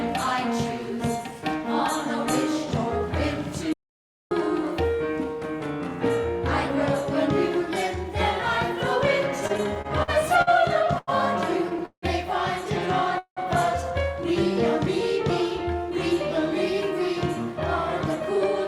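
Audio dropout to silence at 3.73 to 4.31 s: the sound cuts off abruptly into silence, with no room tone, and returns mid-flow. The likely cause is a lost input, such as a disconnected device, a failed link or a momentary mute, while recording carried on writing silence. About 0.58 s of material is gone rather than delayed, so whatever happened in that stretch cannot be recovered.

Repeated stalls (stutter) run from 9.47 to 11.09 s. Packets reached the receiver late or too slowly, so its jitter buffer emptied ten separate times. Each time, the last fragment of sound was stretched to bridge the wait, filling 281 ms in all, with the longest hold about 90 ms. Nothing is missing, but 17 percent of that stretch is concealment, so the audio drags and hiccups in a stuttering pattern.

Call audio freeze at 11.86 to 12.04 s and again at 13.18 to 13.39 s: the audio halts, the final sound lingers as a fading buzz or hiss and then drops to silence, about 80 ms the first time and 100 ms the second. 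Playback then resumes exactly where it stopped. Held-up packets likely drained the jitter buffer. The fills total 169 ms and 181 ms, and each pushes everything after it later by that amount without losing content.

Jitter buffer speed-up from 15.68 to 18.45 s: the receiver held more buffered audio than it wanted and trimmed it by cutting out many tiny pitch-period slices in succession, roughly a tenth of a second in total. Playback runs at about 104 percent speed while the pitch stays unchanged, so this closing stretch runs a little faster.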